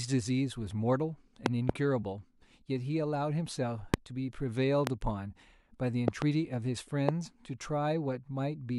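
Sharp loud pops break through the speech at 1.46 to 1.72 s (a double pop), 3.94 to 3.96 s, 4.87 to 4.89 s, 6.08 to 6.24 s (another double), and 7.09 to 7.11 s. They peak roughly 20 to 25 dB above the speech, which carries on underneath. The likely cause is a brief voltage spike, from a connector, switch, static or driver glitch, that is added to the signal and then shaped by the circuitry that follows.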